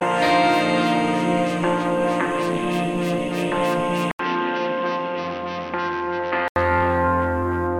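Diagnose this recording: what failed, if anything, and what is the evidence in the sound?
At 4.11 s the music stops for 80 ms, then returns about 5 dB quieter, dull, with nothing above 6 kHz and a faint new noise floor, until 6.56 s. This is likely an input switched to a poorer device at the driver stage. A codec bandwidth drop wouldn't bring a silence, level shift and fresh noise.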